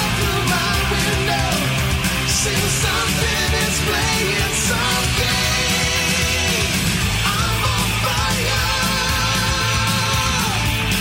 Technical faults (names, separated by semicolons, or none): none